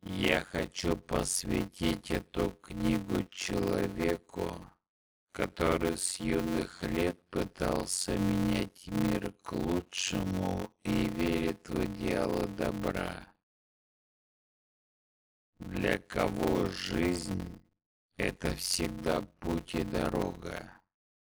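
From the start to the end of the clip, a steady buzz at about 92 Hz sits over everything, and the audio drags along at roughly half speed (0.533 times normal) while keeping close to its normal pitch. This is a block size mismatch (padded). One stage hands over blocks that are too short, which fits 256-sample writes into blocks of about 480 samples. Zeros fill the remainder, so a small silent gap lands in every block. Those gaps repeating produce the buzz and stretch the timing.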